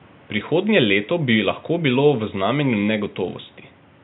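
No technical faults can be heard in the speech. A low background of room noise sits about 30 dB below the voice, part of the recording rather than a fault of the system.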